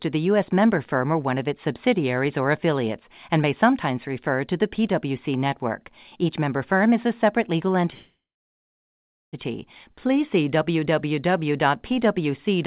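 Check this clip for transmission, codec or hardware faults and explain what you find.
One transmission fault is present, a call audio freeze. From 7.94 to 9.35 s, just after "is a separate legal", the sound stalls. The last sound is stretched briefly and then goes silent for about 1.15 s. Speech then resumes where it stopped, delayed by about 1.4 s with nothing lost. The likely cause is delayed packets draining the jitter buffer. The narrowband sound, with nothing above 4 kHz, fits a G.711 call path.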